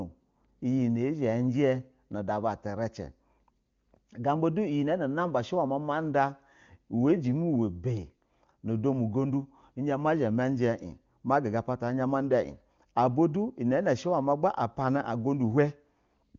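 Nothing stood out on listening to this speech recording.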